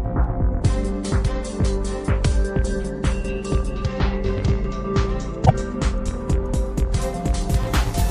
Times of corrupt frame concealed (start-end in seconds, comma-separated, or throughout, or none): none